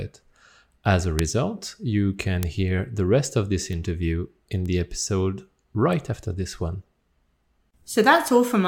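Bit error spikes at 1.19, 2.43, 3.73, 4.66 and 8.28 s: flipped bits throw one to three samples up to about -1 dBFS, heard as sharp ticks, seen as needle spikes and full-band vertical lines.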